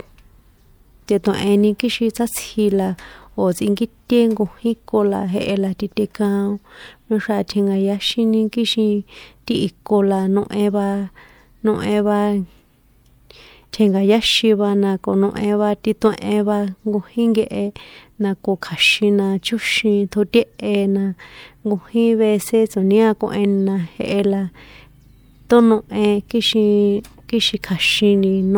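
Around 1.79 s, just before "kixin sátsji la o̱", there's pre-echo: a 13 ms smear of codec noise leaking ahead of the attack, heard as brief hiss that softens the onset.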